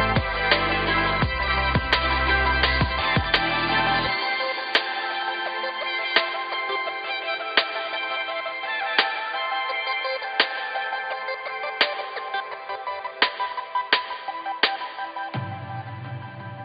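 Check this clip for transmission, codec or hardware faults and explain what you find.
No transmission, codec or hardware faults are audible, and the signal holds steady throughout without dropouts, glitches, distortion or level disturbances.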